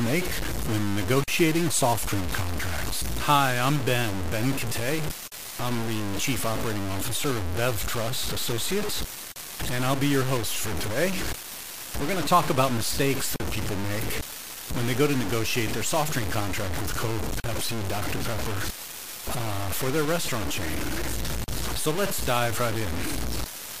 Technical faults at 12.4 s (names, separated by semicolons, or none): low bit depth without dither